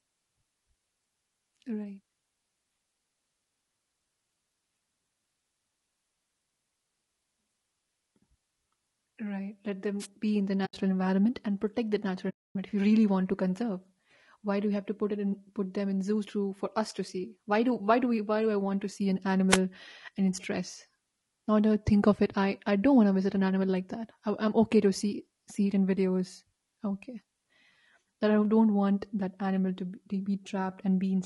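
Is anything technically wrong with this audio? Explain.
Yes. Throughout this speech the voice sounds rough and grainy, with noise filling the gaps between harmonics and a thin, synthetic top end. The likely cause is low-delay AAC compression (AAC-ELD): its short frames resolve pitch harmonics poorly, and the damage here fits a bitrate of around 32 kbps.

At 9.99 to 10.06 s, just before "be in the", and at 19.49 to 19.58 s, between "want to see an" and "and in stress", there are wireless microphone noise hits. The FM radio link fades as reflections cancel, so receiver noise surges into a brief swish of static over the voice.

There are two AAC frame losses with muting. The first runs from 10.65 to 10.74 s, between "be in the" and "environment and protect that", and lasts 80 ms. The second, at 12.30 to 12.56 s, lasts 260 ms. In both, the decoder zeroed the missing frames, and the overlapping windows fade the sound out and back in, leaving soft-edged silent holes.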